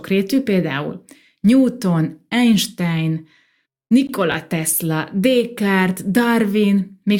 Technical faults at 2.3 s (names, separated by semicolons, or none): none